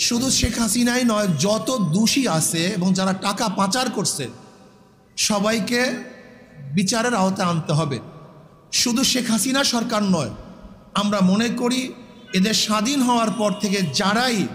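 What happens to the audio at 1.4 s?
Nothing goes wrong at 1.4 s: the audio plays through that moment cleanly, with no dropout, click, distortion or other fault.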